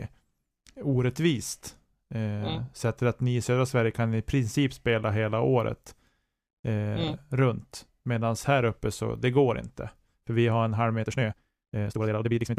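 After "vi har en halv", from 11.00 s to the end, a time-stretched section runs about 1.89 times fast. Pitch holds but pacing turns rushed, likely from length-fitting software.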